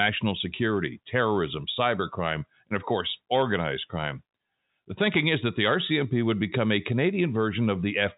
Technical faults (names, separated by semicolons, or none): none